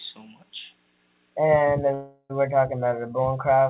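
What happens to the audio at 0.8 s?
Nothing goes wrong at 0.8 s: the audio runs on intact through the call path, whose narrowband coding leaves nothing above 4 kHz, which fits G.711 A-law at 64 kbps.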